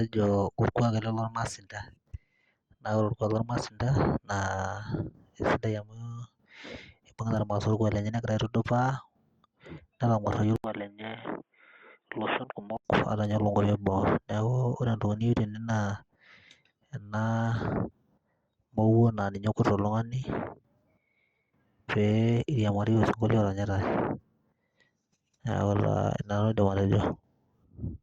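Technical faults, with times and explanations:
10.56 to 12.85 s, input switched to a poorer device: the recording likely jumped to a different, lower-grade microphone or a headset's call profile, which passes only a narrow band. After a gap of about 80 ms the speech turns dull and boxy, with nothing above 3.8 kHz, drops roughly 10 dB in level and carries a faint new background noise well below the speech, then regains its brightness at 12.85 s.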